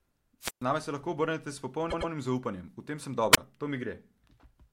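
At 0.41 s the wireless microphone squelch dropout begins: the FM radio signal fades, hiss rises, then the receiver mutes for about 133 ms before the speech returns at 0.64 s. A shorter squelch dropout follows from 3.32 to 3.38 s, muting for roughly 26 ms.

Between them, from 1.90 to 2.10 s, repeated frames cause a stutter. A 104.5 ms block of compressed audio, which fits a run of four frames, plays twice more than it should. This adds 209 ms to the speech.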